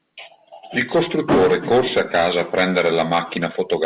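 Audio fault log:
Nothing stood out on listening to this speech clip, which comes over a narrowband call path with no content above 4 kHz.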